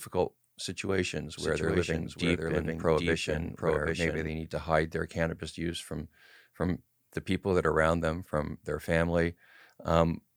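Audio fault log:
1.37–4.27 s, doubled audio track: a second, full-band copy of the speech runs about 0.7 s behind the original at roughly 5 dB lower, so each phrase is heard again on top of the next one. The copy carries no decay or added room colour and cuts in and out abruptly at the edges of the span, starting just before "need to hide their". This is likely a second capture through a slower path, or an edit leaving two copies out of step.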